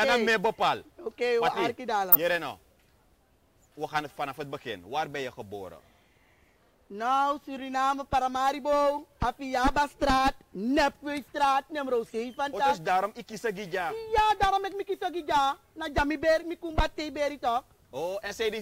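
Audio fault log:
2.12–2.15 s, corrupt frame decoded: one brief, loud burst peaking near -5 dBFS, about one compressed frame long. Damaged bits put energy at wrong frequencies, giving a harsh chirp of noise rather than the gap or smeared repeat of a concealed lost frame.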